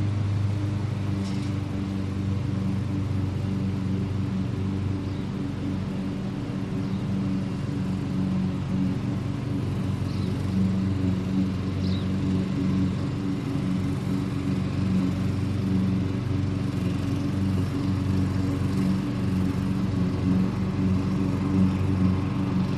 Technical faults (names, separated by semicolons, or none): none